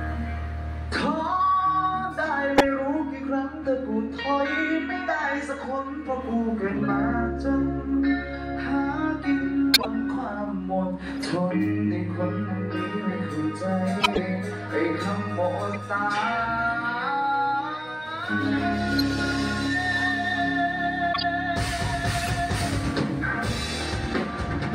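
Corrupt frame decoded at 2.58–2.66, 9.74–9.87, 11.23–11.25, 14.01–14.18, 15.71–15.75, 18.99–19.01, 21.13–21.22 and 22.19–22.31 s. Damaged compressed frames were played anyway, so misread codes push energy to wrong frequencies, heard as brief chirps or noise bursts, loudest near −10 dBFS.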